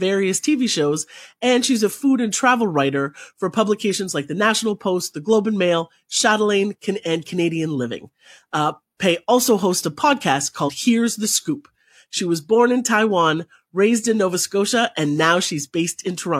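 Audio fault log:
10.64–10.70 s, compressed frames skipped: about one frame of the compressed speech, which fits 46.4 ms frames, was missing or rejected as damaged, so playback jumps ahead by around 50 ms.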